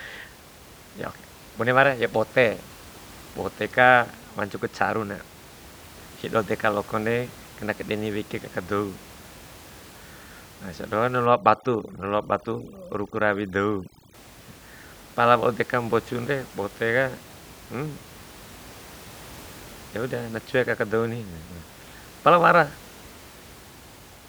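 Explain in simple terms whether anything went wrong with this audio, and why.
From 11.26 to 14.14 s, overdone noise removal clamped down too hard, pushing the quiet background down and breaking it into twinkling, warbling specks, and taking quiet parts of the speech with it.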